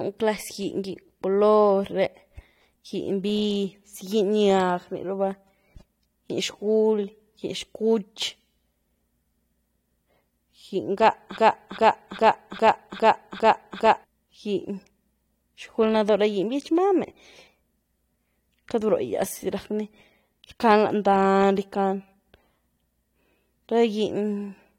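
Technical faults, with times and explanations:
11.37 to 14.04 s, broken-record loop: the player or stream likely stalled and kept resending the last fragment it held, so a 0.40 s slice of speech repeats exactly, seven times back to back, and the speech due in that stretch never plays.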